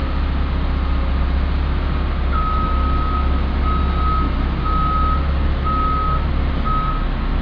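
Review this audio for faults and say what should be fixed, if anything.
Nothing to fix: no audible faults anywhere in this recording.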